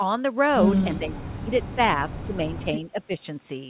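From 0.99 to 1.51 s, 1.75 to 1.79 s, 2.14 to 2.38 s and 2.92 to 3.24 s the speech dips, by roughly 30 dB at worst, likely speech suppressed in double talk by the echo canceller.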